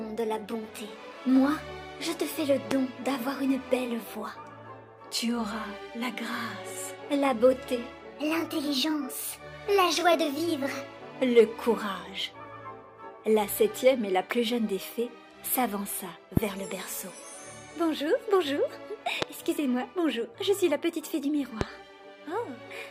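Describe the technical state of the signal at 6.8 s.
At 6.8 s the signal is intact, with no technical fault present at that moment.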